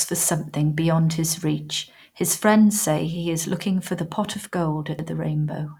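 At 4.99 s the speech is broken by a brief glitch, the sign of damaged data in a compressed stream. Corrupted bytes made the decoder misread a frame and resynchronise at the next header. On a spectrogram it shows as a thin broadband smear. The waveform shows an abrupt discontinuity.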